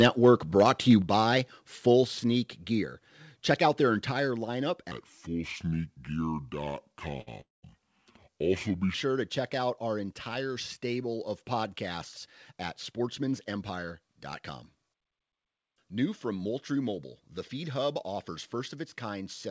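At 1.02 s the level drops by about 5 dB in a single step, with speech and background falling together and staying down. This is the microphone volume stepped down, likely by the call software lowering the input gain. A fade would be gradual and a dropout would return; this does neither.

From 4.92 s to 8.94 s, just before "to check out our", a section at the wrong speed plays at 0.693 times normal speed, likely from playback against the wrong clock. Pitch falls by roughly seven semitones along with the tempo, so the speech sounds deep and slow. Pitch and speed move together, unlike the jitter buffer effects later in the clip.

Inside that slowed section there are two jitter buffer events. At 7.21 to 7.29 s a short stall from a late packet holds the last sound for 56 ms with a slight buzz or dip, then picks up exactly where it stopped with nothing lost. From 7.41 to 7.65 s there is a longer call audio freeze, likely from packets held up in transit. 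The sound trails off and is silent for about 170 ms of the 221 ms gap before resuming intact. The length and the silence set it apart from the brief stall.

Jitter buffer speed-up follows twice. From 12.26 to 14.10 s, right after "entire stable of podcasts", the audio runs at 106% as roughly 100 ms is trimmed. From 14.75 to 15.41 s it runs at 111%, with about 70 ms removed. Both sound hurried but keep their normal pitch, which separates them from the wrong-speed section. All of this passes through a G.722 call path, with nothing above 8 kHz.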